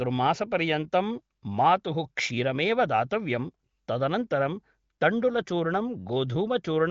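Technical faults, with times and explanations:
No technical faults can be heard in this speech clip. The AMR wideband (HD Voice) codec at 18.25 kbit/s keeps the speech clear, with nothing above 7.5 kHz.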